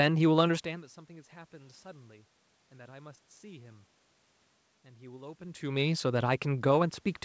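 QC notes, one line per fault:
Nothing stood out on listening to this speech.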